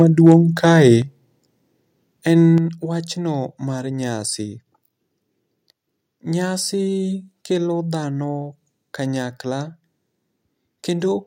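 Right from the start, 0 to 0.35 s, the speech has a harsh, crackly edge on its loudest peaks. That's microphone overload: the input was likely set too hot, pushing peaks about 2 dB past the converter's ceiling, so a small fraction of samples get their tops flattened. Then at 1.02 s the whole level, speech and background together, drops by about 6 dB in a single step, and again at 2.58 s by about 5 dB. That's the microphone volume being stepped down, likely the call software reacting to the earlier clipping by cutting input gain in chunks.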